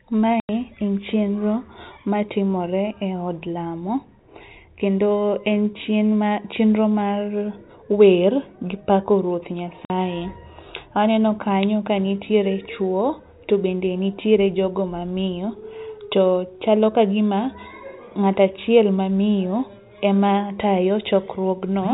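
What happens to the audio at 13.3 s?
Nothing goes wrong at 13.3 s: the speech there carries on intact through its ordinary telephone-band G.711 coding, with no break, glitch or added noise at that point.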